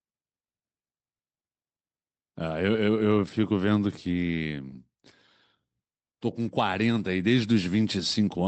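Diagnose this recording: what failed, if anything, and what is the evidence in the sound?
Nothing in this speech recording points to a failure at any stage. It has passed through a WebRTC call path working as intended, and the top end stops at about 8 kHz, which fits Opus running at around 32 kbps.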